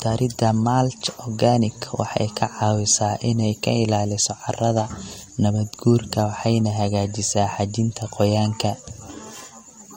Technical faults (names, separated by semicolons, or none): MP3 compression